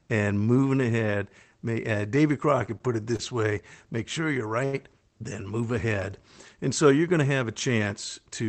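Three times a packet arrived late, the jitter buffer ran dry, and the receiver held the last sound until the data caught up: a short stall from a late packet, at 2.78 to 2.83 s, 3.16 to 3.22 s and 4.65 to 4.76 s. The speech is stretched by 19, 28 and 80 ms, with nothing lost. The first two are brief smears, and the third is a drawn-out sound with a slight buzz or dip before the speech resumes.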